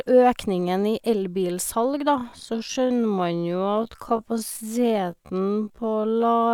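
From 2.08 s to the end, a time-stretched section slows the speech to 0.557 times its pace while pitch holds steady, so it drags. Software likely repeated short slices to fill time. A spectrogram shows unchanged harmonic spacing, drawn-out horizontally.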